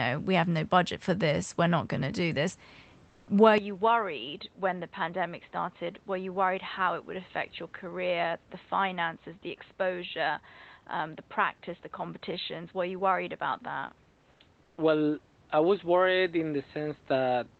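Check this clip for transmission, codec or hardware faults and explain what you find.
Two kinds of fault appear in this speech, carried over an Opus call path whose coding otherwise reaches up to 8 kHz.

From 3.09 to 3.27 s, 14.31 to 14.39 s and 14.63 to 14.77 s, comfort noise replaces the background. Opus DTX likely halted sending during these pauses. The receiver filled them with steady, featureless noise, about 2 to 3 dB quieter than the real background.

From 3.58 s to the end, the input switched to a poorer device, likely another microphone or a headset's call profile. Nothing above 4 kHz survives, so the speech turns dull and boxy. The level drops by roughly 5 dB. There is no gap at the switch. A faint new noise floor appears.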